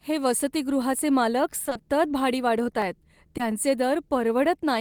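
Speech recording with three transmission faults. From 1.65 to 1.81 s there is repeated packet loss with a robotic sound: four gaps of up to 20 ms each, so half of that stretch is patched with continued sound, giving a choppy texture with pieces missing. At 2.82 s a single sharp click sounds like dropped samples, likely a loss of well under a millisecond that makes the waveform jump. From 3.37 to 3.41 s a short concealed packet loss fills about 20 ms with extrapolated sound, heard as a brief smear before the real audio resumes.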